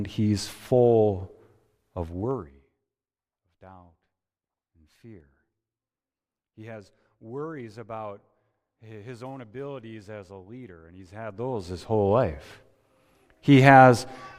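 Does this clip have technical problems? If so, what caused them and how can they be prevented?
Yes, there's zipper noise twice: from 1.98 to 2.81 s as the level drops by roughly 25 dB, and from 11.02 to 12.14 s as it comes back up by about the same amount. The gain moves in discrete jumps, around a hundred a second, with no smoothing between them, so each jump leaves a tiny click and together they make that ticking buzz. To prevent it, ramp the gain per sample or run it through a short smoothing filter.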